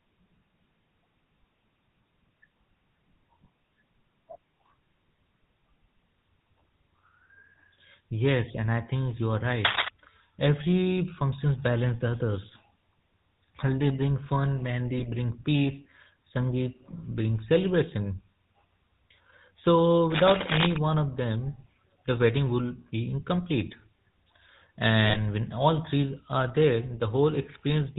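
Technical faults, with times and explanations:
Throughout: GSM full-rate codec. The speech has been squeezed through the original GSM full-rate scheme at about 13 kbps, and the damage is plainly audible. This codec rebuilds the voice from a vocal-tract filter excited by a sparse, regularly spaced pulse train, so much of the fine detail of the original excitation is discarded. The result is a buzzy, gravelly roughness on the voice, and nothing above 4 kHz survives, which leaves the sound dull and band-limited.
9.65 to 9.89 s: cable scratch noise. Just after "I think you are", a quarter-second burst of dense, irregular scratching sits over the speech, rising to roughly 5 dB above the signal. It sounds like a worn cable, connector or control being disturbed, its contact resistance jumping rapidly and injecting ragged noise into the path. That is the likely cause; what is heard is a brief rustling, crackling overlay on the speech for that moment.
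14.98 to 15.09 s and 25.06 to 25.19 s: GSM bit errors. The first falls between "bring fun" and "bring peace", with about 2.3 percent of bits corrupted over roughly five frames. The second comes just before "when all three are", at about 1.9 percent over roughly six frames. Corrupted filter, pitch and gain parameters reach the decoder, so it rebuilds wrong spectra and levels for those frames, and the voice breaks into short squawks, pops and gargling.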